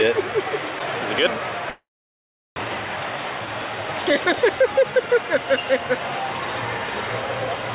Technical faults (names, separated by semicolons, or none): long network dropout; jitter buffer speed-up